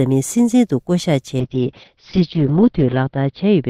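At 1.4 s a call bitrate drop begins and lasts to the end. The encoder gets far fewer bits, so coding turns coarse. The top end is cut from 20 kHz to 6 kHz. The sound goes rough and muffled, worst for 1.29 s.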